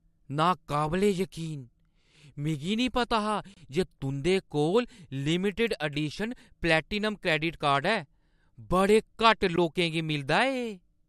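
A gap between stream segments opens at 3.54 to 3.57 s, just after "मिगी निं पता हा", and again at 9.56 s: hard-edged silences of roughly 28 and 16 ms where mistimed segment boundaries left holes. No speech is lost, and the six-second spacing fits 6-second segments.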